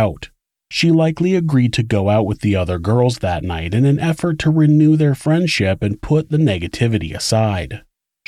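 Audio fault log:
No faults heard anywhere in the speech.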